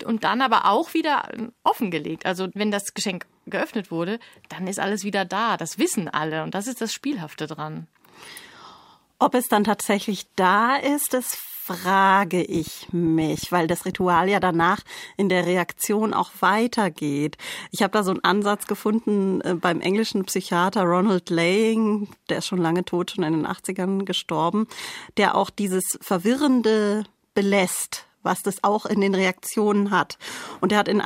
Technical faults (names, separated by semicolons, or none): train of clicks